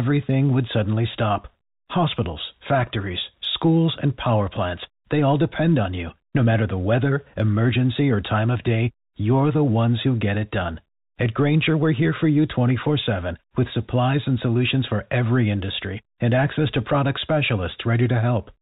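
At 1.42 s, just after "would suddenly", one packet's worth of audio went missing and the receiver concealed the gap with packet loss with pitch repetition, looping the last pitch period until about 1.44 s. The hole is roughly 20 ms, which fits a single lost packet. Because the gap is so short, the repeat never fades to silence. It comes through as a brief held, slightly buzzy tone over the band-limited G.711 telephone sound before the speech resumes.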